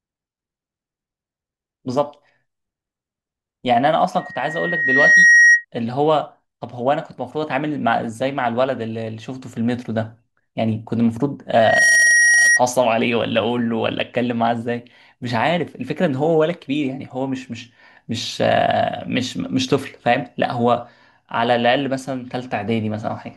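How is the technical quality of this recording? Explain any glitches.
The recording is hurt by loudspeaker feedback squeal twice, from 4.18 to 5.65 s and from 11.53 to 12.61 s. Both times a 1.9 kHz tone swells over about a second, then a split second, and rises above the speech, by about 10 dB and then 5 dB, as the mic-to-speaker loop runs away.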